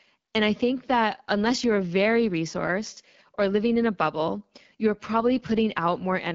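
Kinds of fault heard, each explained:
AMR wideband (HD Voice) codec: The speech runs through a model-based phone codec, and the damage is plainly audible. It sounds rough and raspy, which fits one of the lowest modes, around 8.85 kbit/s. The top is synthetic noise fill, with nothing above 7.5 kHz.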